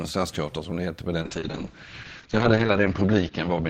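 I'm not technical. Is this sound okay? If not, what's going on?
No. There's a call bitrate drop starting at 1.22 s and lasting to the end of the clip. The call's connection appeared to weaken, so the system told the speech encoder to send much less data. With so little to work with, it describes the speech more crudely and throws away the crisp upper sounds above about 8 kHz. From 1.22 s the speech turns muffled and rough, and it stays at its worst for about 1.6 seconds without recovering.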